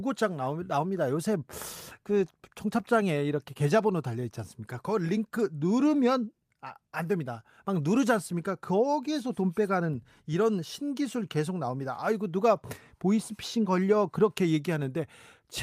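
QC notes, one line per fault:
Nothing stood out on listening to this speech recording.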